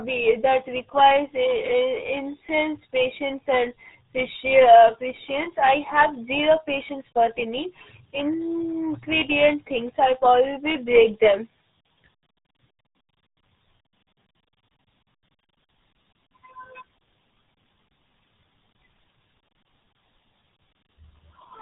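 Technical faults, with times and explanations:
Throughout: RealAudio 14.4 codec. The speech sounds muffled and gargly, with nothing above about 3.8 kHz. That fits an 8 kbit/s dial-up-era codec, which discards all high frequencies and coarsely models what remains, heavily smearing the sound into a watery blur.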